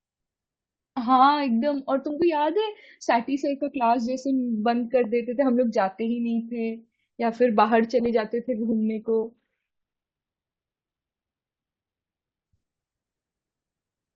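A speech recording with two technical faults. At 8.06 s a block of digital silence, under 2 ms long, cuts in and out with no fade, so it is heard as a tick, likely the sign of an output buffer that was not filled in time. From 8.45 s to 12.45 s the adaptive stream falls to a lower bitrate after the connection slows. Codec artefacts rise, consistent with Opus dropping from about 64 kbit/s to about 12 kbit/s. Quality changes abruptly at both edges, with no gap in the sound.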